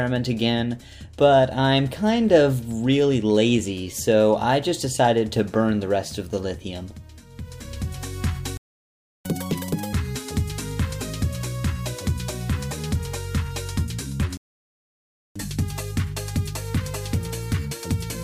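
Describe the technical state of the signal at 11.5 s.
At 11.5 s the signal is intact, with no dropout, clipping, glitch or other audible fault at that point.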